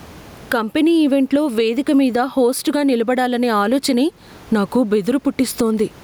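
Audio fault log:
Throughout, gain pumping: The input gain is likely set far too high, so a fast limiter or compressor clamps down on each loud syllable, swinging the level by around 15 dB. Room noise sits about 37 dB below the speech, and the dynamics are squashed.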